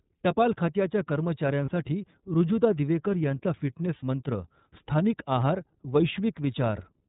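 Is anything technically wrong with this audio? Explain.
Yes, the speech has two related faults.

Throughout, the iLBC codec is plainly audible. Nothing above 4 kHz survives, so the spectrogram shows a hard ceiling there with empty space above it. The coarseness fits the 13.33 kbps mode with 30 ms frames. Each frame's excitation is coded on its own, which gives the voice a slightly rough, synthetic edge and thins the sibilants. In the waveform, the fine detail between pitch pulses looks smoothed and slightly noisy.

There are two lost iLBC frames, each about 30 ms. The first runs from 1.65 to 1.69 s. The second runs from 3.98 to 4.03 s, just after "ऋजुता दिवेकर यांचा". In each gap the decoder repeated the last pitch cycle mixed with noise, which is heard as a brief held, buzzy vowel. On a spectrogram the harmonics flatten into a short, static band. In the waveform there is a run of near-identical repeated cycles. 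Because frames stand alone, normal speech resumes immediately afterwards.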